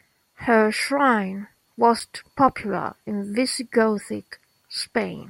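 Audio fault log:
2.00 s CD skip. A tick and a very brief mute, then the speech jumps to another spot before "popular in". The laser lost its track.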